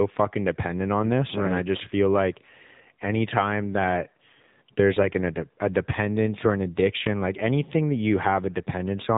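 Thin, boxed-in speech runs the whole clip, with nothing above 4 kHz and a plainly audible buzzy, synthetic edge. This is the AMR narrowband mobile codec (AMR-NB) used on 2G and 3G calls. It samples at 8 kHz and rebuilds the voice from a vocal-tract model fed by a few pulses per 5 ms subframe. The degree of buzz points to one of the lower modes, around 7.4 kbps.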